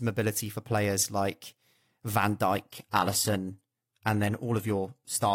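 At 2.68 s the speech switches abruptly, with no gap, to an adaptive stream at a lower bitrate, and stays there to the end. The player has dropped to a cheaper encode, apparently because throughput fell. The shift sounds like moving from a clean AAC stream near 96 kbit/s to an HE-AAC stream near 20 kbit/s. Nothing remains above 14.9 kHz, and coding artefacts become more audible.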